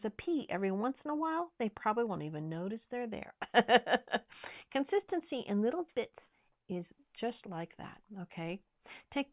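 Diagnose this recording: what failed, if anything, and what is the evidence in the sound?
Nothing in the recording points to a failure at any stage of the chain: the speech signal stays continuous and stable throughout, with no audible breaks, level disturbances or added noise to diagnose.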